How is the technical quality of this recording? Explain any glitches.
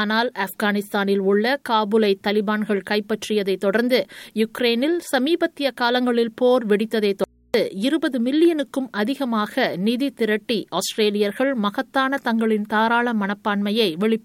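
One glitch stands out. From 7.24 to 7.54 s there is an audio dropout to a faint residue. The sound cuts off abruptly for about 0.3 s. Only mains hum remains, roughly 35 dB below the signal. The likely cause is a lost input while the path stayed live.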